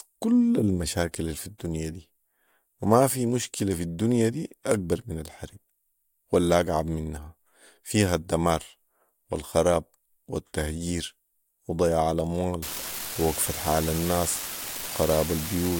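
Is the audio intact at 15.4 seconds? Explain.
No. At 15.4 seconds an unreliable data bit is active, from 12.63 s to the end at 15.79 s. A marginal bit line flips in random samples, each adding a spike of about -21 dBFS, heard as steady crackle continuing through pauses. The waveform shows scattered equal-height spikes; the spectrogram shows broadband speckle.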